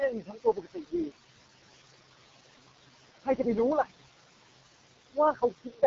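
Noise suppressor artifacts run throughout. The suppressor lowers the room noise, which sits about 12 dB below the speech, by about 18 dB between phrases and lets it rise under them.

AMR wideband (HD Voice) codec damage is also constant. The speech sounds rough and raspy with nothing above 7.4 kHz, which fits the codec's lowest 6.6 kbit/s mode.

Speech cut by the noise suppressor occurs at 0.12 to 1.12 s, at 3.21 to 3.46 s and at 5.33 to 5.83 s. Each time the suppressor mistakes speech for noise and turns it down, by up to about 21, 19 and 15 dB respectively. Roughly 0.7 s, 0.1 s and 0.3 s of the speech sound swallowed or faint.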